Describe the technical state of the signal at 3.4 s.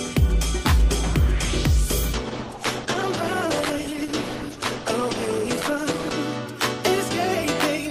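At 3.4 s the signal sits inside an adaptive stream at a lower bitrate, running from 2.13 s to 6.13 s. A slowed connection made the stream switch from Opus at 64 kbit/s to 16 kbit/s. The treble is gone above about 12.1 kHz. Codec artefacts rise, and the change arrives abruptly without a gap.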